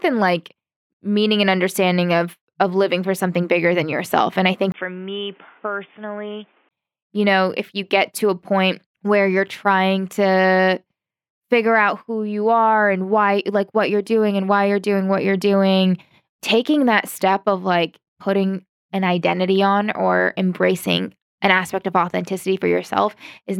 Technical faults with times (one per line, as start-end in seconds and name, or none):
4.72-6.71 input switched to a poorer device